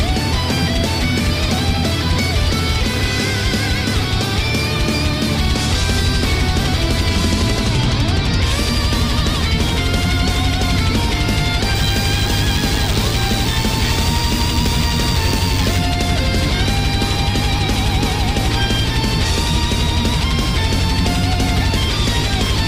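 From 11.75 to 15.78 s, DECT cordless phone buzz appears: radio bursts every 10 ms get rectified, giving a thin 100 Hz buzz, well below the signal, drawn on a spectrogram as evenly spaced harmonic lines.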